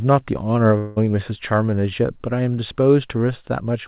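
From 0.78 to 0.98 s the speech gives way to a buzzy, smeared continuation of the last sound that fades without reaching silence, and when the speech resumes, roughly 0.18 s of it is simply gone. This is likely a long network dropout: the receiver stretched the final received audio to cover the gap. Unlike a brief packet-loss glitch, the fill lasts long enough to decay audibly, and unlike an edit, the join carries that synthetic tail. The band stays capped at 4 kHz throughout, as expected of a G.711 call path.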